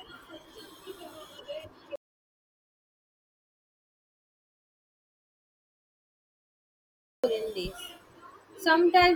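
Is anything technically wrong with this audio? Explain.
Yes. From 1.96 to 7.24 s there's an audio dropout to silence, likely a lost input with the recorder writing silence, so speech cuts out to silence with no room tone for 5.28 s.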